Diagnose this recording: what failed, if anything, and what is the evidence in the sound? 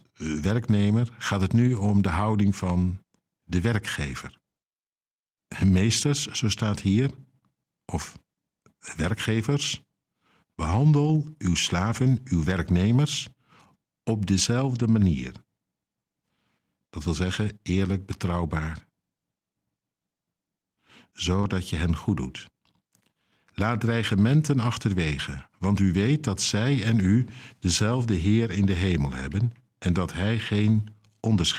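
Lost packets rebuilt from error correction, at 11.03 to 11.09 s (40 ms), 14.71 to 14.81 s (60 ms) and 21.43 to 21.45 s (20 ms). This is a network fault repaired in the codec. The audio never drops out, but each stretch of speech turns briefly rougher and noisier. That points to the decoder playing the low-bitrate backup copies that Opus tucks into the following packet. The lengths fit runs of two, three and one lost 20 ms packets.

Short concealed packet loss at 21.41 s, lasting about 20 ms and running straight into the rebuilt stretch that follows. This is also a network fault, handled at the decoder. No backup copy arrived for this piece, so the receiver invented it by extending the preceding speech, following its pitch if voiced or shaping noise if not, then blending into the rebuilt audio. The result is a brief smear or wobble just before the rough patch.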